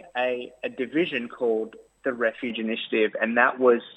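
At 2.5 s the audio abruptly turns dull and boxy, with no gap, most likely because the input switched to a poorer device. A spectrogram shows a hard ceiling at 3.8 kHz from there to the end and a new faint noise floor, and the waveform steps by about 5 dB.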